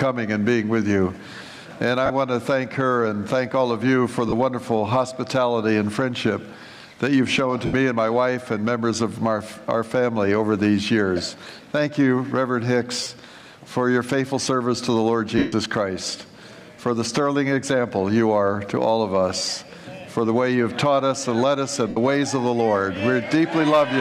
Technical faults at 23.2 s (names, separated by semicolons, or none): none